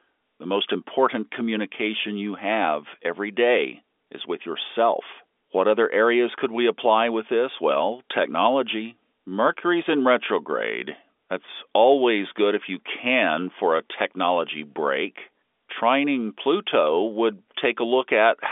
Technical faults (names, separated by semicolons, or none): none